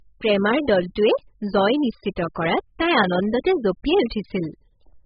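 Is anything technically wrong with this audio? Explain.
Yes. Throughout the speech nothing is present above 5 kHz, and the sound is dull, smeared and warbly, with fizzy sibilants. This is likely heavy AAC compression: at a very low bitrate, around 8 kbps, the encoder lowers its cut-off and coarsely quantises or drops spectral bands.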